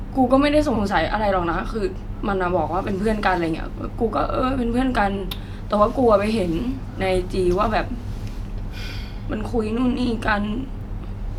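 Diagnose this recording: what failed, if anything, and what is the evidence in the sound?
Repeated frames at 0.75 to 0.81 s and 5.17 to 5.21 s, a fault in the codec stream during storage or transmission. At 0.75 s a 60 ms stretch of speech plays twice. At 5.17 s a 20 ms stretch plays three times. Each is a brief stutter, and the second adds 40 ms to the clip. The decoder was fed the same compressed blocks again, so it reproduced identical audio back to back, with a seam wherever the replayed block fails to meet the next.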